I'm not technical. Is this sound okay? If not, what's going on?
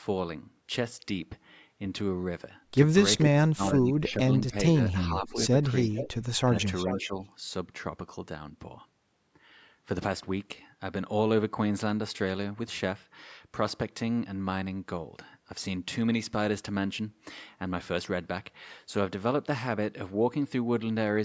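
No. The voice drops away at 3.37 to 4.54 s, 5.18 to 5.64 s and 6.88 to 7.19 s. This is speech suppressed in double talk, likely from both sides talking at once.

There is also echo leak. A copy of the voice returns about 0.44 s late at 5.13, 5.82 and 6.62 s, likely from a loudspeaker echo getting through.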